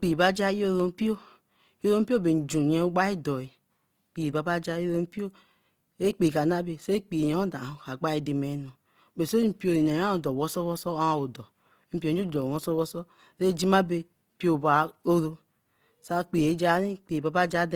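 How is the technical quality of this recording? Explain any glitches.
The recording has one fault, present for the whole clip: Opus compression. It is plainly audible. The speech sounds grainy and rough, with a noisy texture. The top end still reaches about 20.2 kHz. This is likely a low-bitrate Opus encode in its music-oriented CELT mode, which points to about 24 kbps. At that rate the encoder cannot code every band accurately. It keeps each band's energy but fills missing detail with noise or copied lower bands, which causes the graininess.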